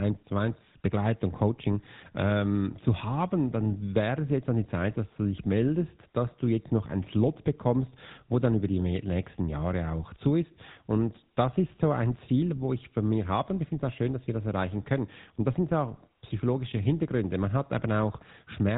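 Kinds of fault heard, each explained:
GSM full-rate codec: The speech has been through the original GSM mobile codec, which models the vocal tract and excites it with a sparse, regularly spaced pulse train. The result is a plainly audible buzzy, gravelly roughness and nothing above 4 kHz, consistent with a 13 kbps stream.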